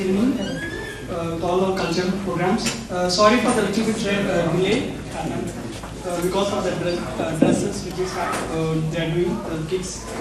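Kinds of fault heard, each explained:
MP2 compression: Throughout, the sound is dull and gurgling, its upper sub-bands flickering in and out while what remains is coarsely quantised into a granular grain, likely MPEG Layer II at a rate near 80 kbps. A simple low-pass would dull without that churning.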